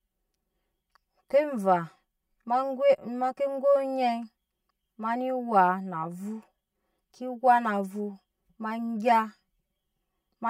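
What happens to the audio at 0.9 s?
Hollow and phasey, as throughout the clip: channel delay (comb filtering), with one channel lagging roughly 5 ms, so mono summing cuts evenly spaced notches from around 100 Hz.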